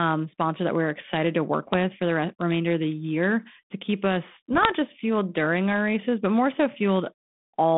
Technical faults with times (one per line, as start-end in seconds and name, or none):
1.63-1.75 bit errors on an ADPCM link
4.53-4.73 bit errors on an ADPCM link